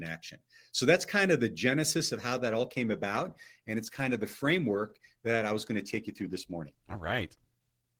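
At 2.32 s the adaptive stream abruptly drops to a lower bitrate; codec artefacts rise to the end, fitting an Opus step from 64 to 16 kbit/s.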